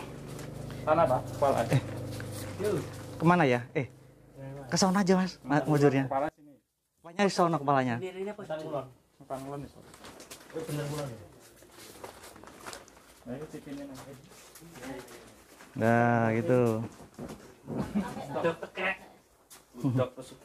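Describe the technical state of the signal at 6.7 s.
At 6.7 s the signal sits inside a stretch from 6.29 to 7.19 s where one channel is likely inverted, its polarity flipped against the other. When the two sides are combined to mono, everything they share cancels, so centred content and low end collapse and the level falls by about 23 dB. What remains is only the difference between the channels, a faint residue of the sound until the full signal returns at 7.19 s.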